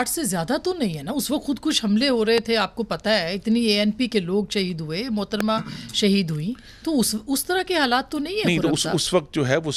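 At 2.38 to 2.40 s a loud pop cuts through the sound. It is a single sharp click, peaking about 15 dB above the surrounding level. A second, stronger loud pop follows at 5.40 to 5.43 s, about 20 dB above the signal. Each lasts around 20 ms. The sound continues underneath both. The likely cause is a sudden voltage pulse, such as static, a switch or a driver glitch, added to the signal.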